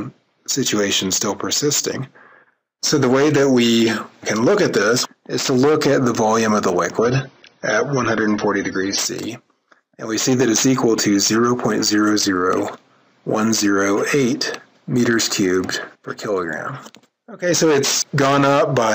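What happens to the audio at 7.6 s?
At 7.6 s the audio is dull, with nothing above about 10.5 kHz, and it switches back just as abruptly with no gap. The stretch runs from 6.98 to 8.98 s. This is an adaptive stream at a lower bitrate: the player briefly dropped to a leaner encoding, which points to something like 24 kbit/s instead of 96.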